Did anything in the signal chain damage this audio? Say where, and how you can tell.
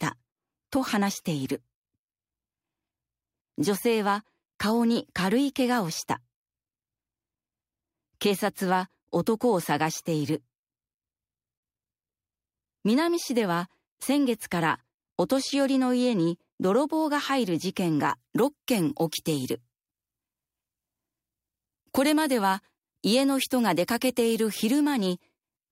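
Yes. From 18.10 s to the end, pre-emphasis is left on: treble sits about 8 dB high at 10 kHz relative to 1 kHz, so the sound turns thin, bright and sibilant. The gentle shelf fits the CD 50/15 µs curve, pointing to playback skipping de-emphasis rather than an arbitrary EQ boost.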